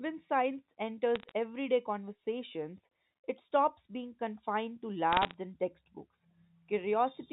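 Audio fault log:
1.16–1.31 s, bit errors on a digital phone line: a short burst of flipped bits, at a rate of a fraction of a percent, corrupts single samples on the mu-law G.711 path, and hits on sign or high-order bits throw those samples far off, producing sharp ticks and a brief crackle laid over the speech.
5.13–5.34 s, bit errors on a digital phone line: a slightly denser burst, around half a percent, does the same, so this crackle is a little thicker and busier.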